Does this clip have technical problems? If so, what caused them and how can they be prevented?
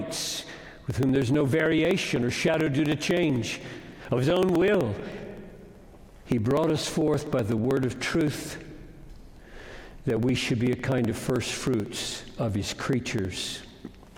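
Yes. Periodic USB or driver dropouts run from 0.09 s to 14.07 s. Every 63 ms, about sixteen times a second, something stalls the USB bus or audio driver. Roughly a millisecond of audio is skipped each time. This leaves a steady train of ticks over the sound. Prevent it by disabling or rescheduling the interfering background task and using a larger buffer.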